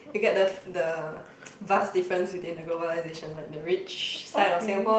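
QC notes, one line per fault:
No faults heard anywhere in this speech.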